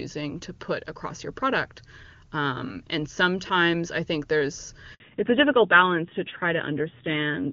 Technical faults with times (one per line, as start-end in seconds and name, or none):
4.94-5.00 handover gap
5.00-7.52 fallback to narrowband